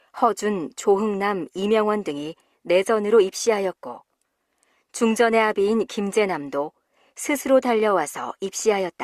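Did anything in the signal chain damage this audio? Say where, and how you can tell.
No, no chain damage audible.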